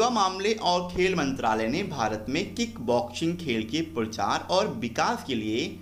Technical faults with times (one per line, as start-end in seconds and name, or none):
none